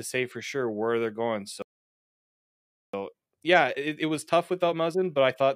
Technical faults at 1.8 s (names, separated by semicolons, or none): playback stall